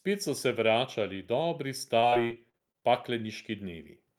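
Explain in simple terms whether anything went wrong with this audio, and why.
Something did go wrong, between about 1.99 and 2.84 seconds: that stretch of speech turns choppy and robotic. That's repeated packet loss (robotic sound). Bits of the audio kept going missing in transit, around nine small holes, none longer than about 39 ms. Each time, the system papered over the hole by stretching the last bit of sound it had. So about a quarter of that stretch is filler rather than real speech, which is what gives it that robotic, stuttering feel.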